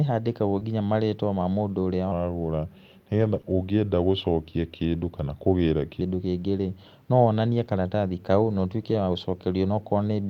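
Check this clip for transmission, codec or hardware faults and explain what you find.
Three kinds of fault show up in this speech: two short concealed packet losses, a long stretch at the wrong speed, and four spots where lost packets were rebuilt from error correction.

Short concealed packet loss, at 0.59–0.63 s (just before "marĩtwa ma mũndũ") and 3.41–3.45 s. About 20 ms of audio didn't arrive in time each time, so the receiver stretched the preceding sound over the hole and blended back. You hear a quick smear or wobble.

Section at the wrong speed, from 2.12 s to 6.01 s. This runs at 0.858× speed, so the speech is slower and sits roughly three semitones lower. It's likely a resampling or clock mismatch, where that section was played against the wrong rate. Pitch and tempo drop together.

Lost packet rebuilt from error correction, at 3.21–3.39 s, 5.65–5.71 s, 6.57–6.67 s and 8.89–8.99 s, covering 100, 40, 60 and 60 ms. 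The decoder filled each loss with the low-bitrate backup copy carried in the following packet, so nothing drops out. Those patches just sound rougher and noisier. The first one fits about five lost packets.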